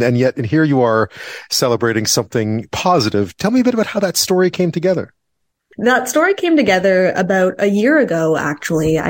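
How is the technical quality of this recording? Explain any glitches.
The technical quality of this recording is good, and there are no glitches to explain.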